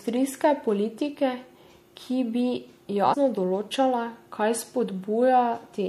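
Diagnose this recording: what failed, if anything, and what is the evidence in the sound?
Codec stage: plainly audible MP3 compression runs through the whole speech clip, with watery swirling on sibilants and smeared onsets. The damage fits a low bitrate around 64 kbps, likely starved of bits so the encoder dropped weak high-frequency content.

Storage or decoding stage: compressed frames skipped at 3.13 s. The speech jumps ahead by roughly 150 ms, consistent with about seven missing frames of 26.1 ms each. Overlapping neighbour frames blend the join into a short smeared blip rather than a click.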